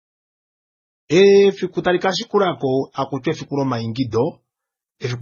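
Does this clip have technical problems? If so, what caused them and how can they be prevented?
Yes. Throughout the speech there is a dull, smeared quality in which swirly, watery artefacts sit on top of a coarser, grainy roughness, the mixed signature of transcoding between lossy codecs. The likely cause is audio encoded at a low bitrate and then re-encoded one or two more times, each pass adding its own artefacts while keeping the lowest band limit in the chain. On a spectrogram nothing appears above about 6.9 kHz, with blotchy, patchy energy below that edge. The smooth fade-in near 1.0 to 1.08 s is a normal edit. To prevent this, keep a lossless master and encode to the final format only once, at a higher bitrate.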